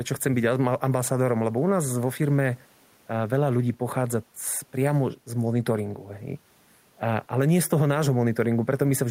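No technical faults are audible.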